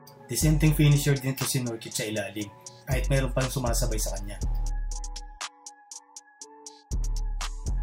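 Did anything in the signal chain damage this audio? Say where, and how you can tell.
No, nothing in the signal chain audibly damaged this audio.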